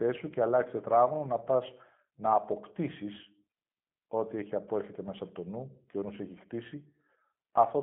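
From start to finish the speech carries G.729 codec damage, plainly audible. The sound is rebuilt from a vocal tract model and a few pulses per frame rather than stored directly, which fits an 8 kbit/s telephony stream, so it comes out rough and slightly synthetic. The line band runs from about 150 Hz to 3.4 kHz, and on a spectrogram everything above 3.5 kHz is empty.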